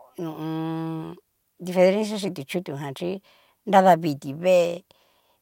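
Nothing stood out on listening to this speech recording.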